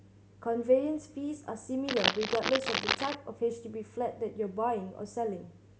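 From 1.88 s to 3.15 s, a dense, uneven scratching and rustling sits over the speech, roughly as loud as the talker, so for just over a second the two compete. This is cable scratch noise. It is likely caused by a worn cable, connector or control being moved. Its contact resistance then jumps about rapidly, which injects irregular bursts of noise straight into the signal path.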